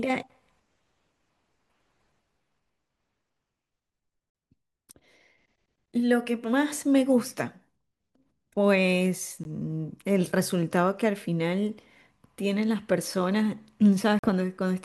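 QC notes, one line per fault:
4.30–4.35 s, Bluetooth dropout: speech cuts to silence for about 46 ms, then resumes as if it had played on, likely from three lost packets.
9.44–9.46 s, Bluetooth dropout: a brief hole removes about 15 ms of speech, then resumes further along, likely from a single lost packet.
14.19–14.26 s, Bluetooth dropout: silence removes about 46 ms of speech before it resumes where it would have been, which fits a likely loss of three packets.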